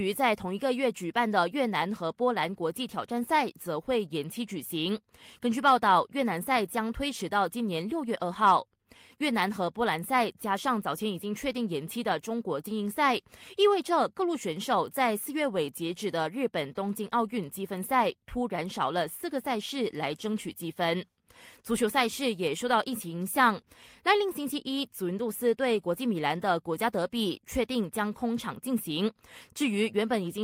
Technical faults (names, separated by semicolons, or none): none